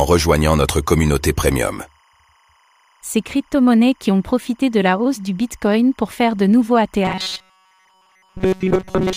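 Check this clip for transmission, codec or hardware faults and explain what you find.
Two faults are present in this speech clip.

Timecode bleed runs throughout. Linear timecode at 25 frames per second leaks in faintly, roughly 40 dB down, as a chirping warble switching near 1 kHz and 2 kHz. On a spectrogram it shows as two constant horizontal bands.

Robotic sound from repeated short buffers runs from 7.05 s to the end. The speech becomes a rigid metallic buzz at 188 Hz. The likely cause is late audio being padded by looping about 5 ms snippets while most of the real signal is skipped. The waveform shows identical repeating cycles, and the spectrogram shows harmonic stripes spaced 188 Hz apart.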